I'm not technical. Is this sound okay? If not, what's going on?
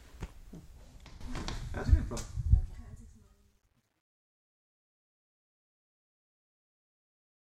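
No. At 1.21 s the digital volume was likely switched up in a single step instead of being eased in. That's a sudden gain jump: from there to the end, the sound and its background hiss both become abruptly and noticeably louder together.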